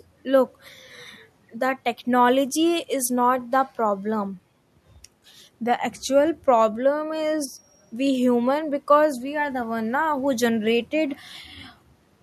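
Nothing in this speech recording points to a technical fault; there's just a faint bit of background from the room, sitting about 44 dB below the talking.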